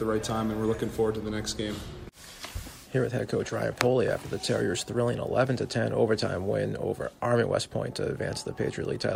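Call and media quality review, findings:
No audible faults found.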